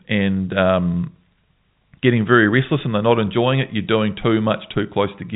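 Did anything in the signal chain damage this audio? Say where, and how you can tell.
No, the only stage that leaves a mark is the telephone coding on the path, a G.711 A-law link whose hard top at about 3.8 kHz fits a 64 kbps narrowband line working as designed.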